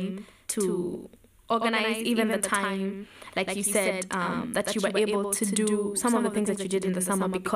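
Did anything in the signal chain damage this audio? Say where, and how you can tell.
Yes. A doubled audio track runs throughout the speech. A full-band copy trails by about a tenth of a second, roughly 5 dB quieter, with no decay or room colour. This likely comes from a second, slower capture path at the driver stage.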